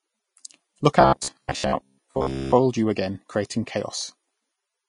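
Speech, and it carries two problems. Throughout, there's nothing above 10.5 kHz, and the treble has that grainy, hissy texture where fine detail gets swapped for noise. The codec damage is plainly audible, and it sounds like Vorbis compression at a low bitrate, likely around 30 kbps, where the encoder trims the top end and quantises what's left so coarsely it turns to noise. Then from 1.01 to 2.54 s you get the robotic sound from repeated short buffers: a rigid, metallic buzz at 66.8 Hz riding over the speech, which only loosely follows the original. That rate works out to chunks of about 15 ms being replayed. The likely cause is audio arriving too slowly, so playback keeps looping the last buffer, and most of that stretch, roughly 70%, is repeats rather than fresh audio.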